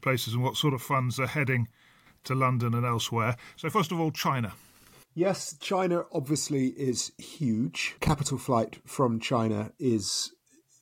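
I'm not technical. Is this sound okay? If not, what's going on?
Yes, this speech recording is technically sound, with nothing in the signal that points to a problem.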